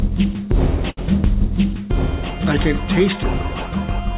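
At 0.9 to 0.99 s there is a short stall from a late packet. The jitter buffer ran dry, so the last sound is stretched for about 71 ms, with a slight buzz or dip, before playback resumes at the same point. Unlike a packet loss, nothing is skipped. Everything after simply runs about 71 ms late, all within the 4 kHz band of the G.711 call path.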